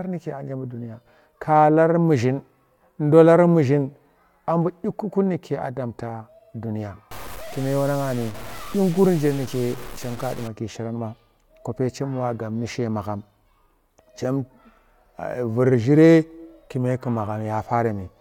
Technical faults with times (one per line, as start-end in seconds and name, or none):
7.11-10.48 low bit depth without dither